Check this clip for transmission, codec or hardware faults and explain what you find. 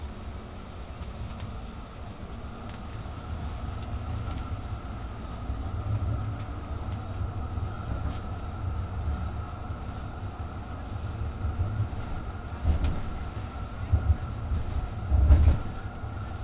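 One fault, aliasing, runs through the whole clip. The sound was resampled down without an anti-alias filter. Energy above 4 kHz folds back below it, roughly 30 dB under the sound, which fits a drop to an 8 kHz rate. High content turns gritty and metallic, with wrong pitches.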